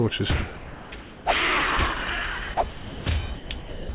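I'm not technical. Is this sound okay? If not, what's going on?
No. The sound keeps cutting out and being replaced by a soft hiss at 0.56–0.92, 1.01–1.25, 2.54–2.57, 2.69–3.05, 3.35–3.5 and 3.59–3.89 s. That's likely sound dropped by the voice detector: the sending end mistook real sound for background and stopped sending, so filler noise played instead. It all comes through a phone-style call path too, so nothing above 4 kHz survives.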